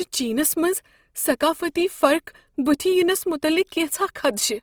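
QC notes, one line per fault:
Throughout: Opus compression. The speech sounds rough and grainy, with a noisy, gritty texture. The damage is plainly audible but swirls less than MP3 damage would. Bandwidth stays full, with content up to about 20.3 kHz. The likely cause is Opus coding in its CELT music mode at a low rate, consistent with around 24 kbps. With bits scarce, each band's energy is kept but its fine detail is refilled with folded or noise content, producing the grain.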